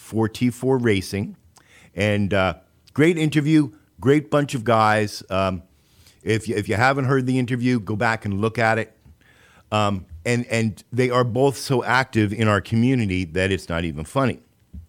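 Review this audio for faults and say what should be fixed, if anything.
A repeated buffer occurs at 6.23 s, just before "if you if you". Fresh audio did not reach the output in time, so the device replayed the piece it already held, here two extra times, with a hard edge at each join. Each repeat is only about 1.45 ms long, which fits a 64-sample buffer, so the stutter is too short to hear as one. It comes through as a click or a brief buzz, and a few milliseconds of real speech are lost. To prevent it, enlarge the playback buffer or give the audio thread higher priority so data always arrives before the device needs it.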